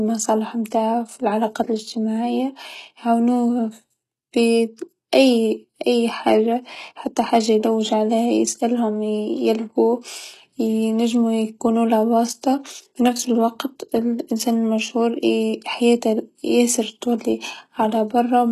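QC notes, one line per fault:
Throughout: HE-AAC compression, likely at around 16 kbps, with heavy damage. Nothing reaches above 12.3 kHz, and the treble below that is synthesised from copied lower bands, so harmonics misalign across the crossover and s sounds turn gritty, metallic and lispy.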